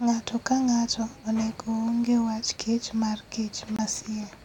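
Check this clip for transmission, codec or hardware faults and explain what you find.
One fault turns up in this speech recording. Bluetooth dropout, 3.76 to 3.80 s: the audio falls silent for about 35 ms, then resumes further on, as though it had kept playing. The likely cause is a packet reaching the headphones too late and being discarded, which fits one lost frame of about 23 ms.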